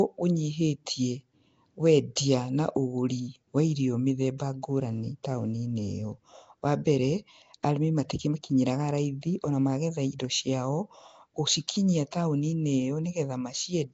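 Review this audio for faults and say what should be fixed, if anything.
The speech has passed through a low-rate Flash-era voice codec, most likely Nellymoser compression. It codes short blocks at a fixed two bits per sample, so quiet bands get no bits and are filled with noise. The result is a rough, hissy halo and a smeared, underwater quality across the whole clip. Nothing reaches above 7.8 kHz, which fits a bitrate of about 32 kbps. The codec damage is plainly audible.

Pre-echo is a side effect of the same block coding. Quantisation noise sized for a loud attack gets spread back over the quiet start of its block. Around 2.16 s, just before "na ũgũri wa irio", a brief hiss of about 14 ms leads into the onset. At 12.11 s a similar 15 ms smear softens the next attack, so both transients sound blurred rather than crisp.

To prevent both, capture and deliver the speech with a modern codec such as Opus at a higher bitrate, or keep it uncompressed, instead of routing it through Nellymoser.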